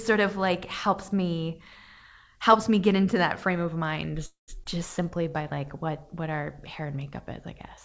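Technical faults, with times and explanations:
4.26 to 4.50 s, call audio freeze: the sound stalls for about 0.22 s. The last bit of audio is drawn out into a short fading buzz, then goes quiet for roughly 0.14 s before things pick up exactly where they left off. Nothing's actually lost, but the timeline gets pushed back by that same amount. That pattern points to packets held up in transit, likely leaving the jitter buffer empty while the receiver filled in.
4.64 to 4.67 s, skip ahead: right after that stall there's a quick jump forward. Around 70 ms of audio just isn't there, and the two sides are stitched together with only about 10 ms of filler, so you hear a tiny abrupt splice rather than a gap. Audio was dropped, in transit or by the buffer, clawing back some of the delay that had just built up.
5.03 to 5.61 s, jitter buffer slow-down: over this stretch playback runs at about 89% speed with the pitch unchanged. 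The receiver repeats single pitch periods or bits of pauses back to back, adding 72 ms in total, which draws the sounds out and gives them a slight stretched, sluggish feel. It's the buffer padding itself back up to a safer reserve.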